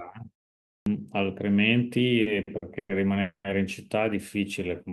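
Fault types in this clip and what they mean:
Clipped start after a pause: After about 0.54 s of silence, the speech at 0.82 s begins abruptly, its first 43 ms missing because the output device was still waking. The waveform jumps from flat to full amplitude, and the spectrogram lacks the usual soft onset.
Repeated stalls (stutter): Between 2.21 and 2.91 s the speech drags through four stalls totalling 260 ms, the longest 110 ms. Each time the buffer ran dry and the last sound was stretched, so nothing is lost. The spectrogram shows smeared, repeated frames over about 37% of that span.
Call audio freeze: At 3.21 s the sound hangs for 230 ms, continuing as a fading buzz that drops to silence for its last 110 ms before resuming where it stopped. The likely cause is delayed packets emptying the jitter buffer. The spectrogram shows a flat, stretched band, then a blank gap.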